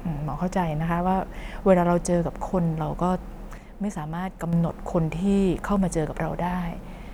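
A sudden gain jump runs from 3.58 to 4.53 s in this speech clip. The level drops by about 6 dB at once and stays there, then returns at 4.53 s. Speech and background noise fall and rise together, with no fade at either edge. That pattern is likely a digital gain setting applied instantly, sample to sample, rather than ramped. A 6 dB step is what a one-bit shift would produce.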